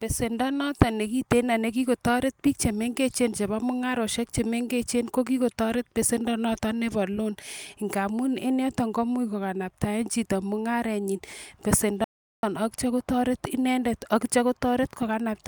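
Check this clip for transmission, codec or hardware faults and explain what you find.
One fault stands out, an audio dropout to silence from 12.04 to 12.43 s. The speech cuts off abruptly and the signal drops to silence for about 0.39 s, with no room tone or background underneath, before speech resumes mid-flow with "atyo kotoret inendet atyo". Whatever was spoken in that gap is lost. The likely cause is a brief loss of the input, such as a momentary disconnect, a failed link or an accidental mute, while the recorder kept writing silent samples.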